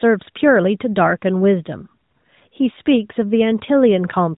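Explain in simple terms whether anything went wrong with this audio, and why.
Nothing went wrong with this audio: the speech simply comes through a mobile-phone connection as it normally would, so there is nothing here to fix.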